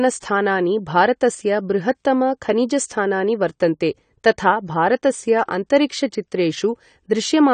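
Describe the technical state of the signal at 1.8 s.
AAC compression damage is present at 1.8 s and runs throughout the clip. The speech has nothing above 9 kHz, and the remaining band sounds plainly smeared, most likely from AAC-LC coding. The encoder quantises each frame's frequency lines against a hearing model, and a starved bit budget, which fits a rate around 32 kbps, forces it to drop the top octave and coarsen what remains. The result is a dull, muffled tone with a warbling, fizzy edge on sibilants.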